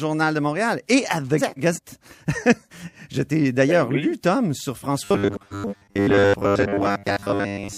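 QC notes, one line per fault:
1.38–1.79 s and 5.32–5.74 s, frames out of order: in each spot two neighbouring chunks, each about 0.19 s long, play in swapped order, so you get a short garbled flutter. That points to runs of about four frames arriving back to front and being decoded as received. Nothing goes missing, so the timing stays intact. The second one lands inside the robotic stretch below.
5.05–7.78 s, robotic sound from repeated short buffers: from here to the end the speech turns into a stiff metallic buzz pinned at 100 Hz. It still roughly tracks the speech. A 100 Hz buzz fits a chunk about 10 ms long being looped. The likely cause is new audio arriving too slowly, so the player keeps repeating its last buffer while skipping real audio, roughly 70% of it.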